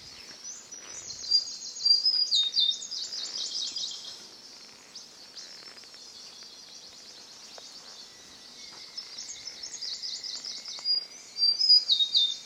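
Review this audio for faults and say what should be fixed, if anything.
Nothing needs fixing, as the signal holds steady throughout with no audible technical faults.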